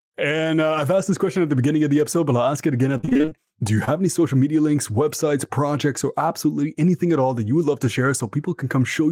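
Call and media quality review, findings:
Repeated packet loss (robotic sound), 2.97–3.33 s, right after "it again": choppy stretch with pieces missing. Jitter buffer/PLC on the receive side keeps extending the last sound over holes of up to about 23 ms, roughly nine of them, so nearly half that span is patched.

Short concealed packet loss, 3.85–3.89 s, just before "any social media links": quick smear. About 20 ms never arrived, and the decoder's concealment filled it from the preceding sound before crossfading back into the real stream.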